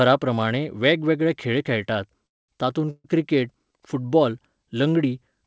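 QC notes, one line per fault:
2.27–2.51 s and 2.90–3.07 s, call audio freeze: the sound stalls after "वेगवेगळे खेळ खेळटात" and again just before "क्रिकेट फुटबाॅल". The first stall inserts a 215 ms gap that is almost entirely silence. The second inserts a 138 ms gap that is mostly a fading continuation of the last sound, with only a short silent tail. The likely cause is late packets draining the jitter buffer. Nothing is lost, so the audio resumes where it stopped, only later. The G.722 path keeps its band limit, with nothing above 8 kHz.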